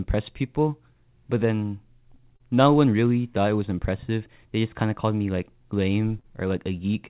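Throughout the speech, the top of the band sounds slightly dull and hollow. This is channel delay (comb filtering): one channel lags the other by a tiny fraction of a millisecond, which fits a delay of a few samples, and summing to mono cancels their shared content. The first notch sits around 7 kHz. Because the call path passes nothing above 4 kHz, only the gentle roll-off below that notch is audible.

Between 2.36 and 2.43 s, just after "people but then" and before "no one really thought", there is a brief smeared wobble. A second, similar smear falls at 6.20 to 6.26 s. Each is short concealed packet loss. About 40 ms of audio arrived too late for the decoder, and roughly 35 to 39 ms of that gap was filled by extending the preceding sound before blending back into the real signal.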